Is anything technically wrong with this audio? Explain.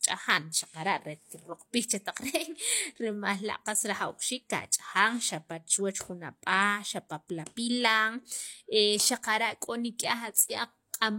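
Yes. At about 10.34 s the speech has pre-echo: a transform codec spread quantisation noise across its block, so a short hiss leaks about 13 ms ahead of a sharp attack, softening it. Unlike reverb or echo, this smear comes before the onset, not after.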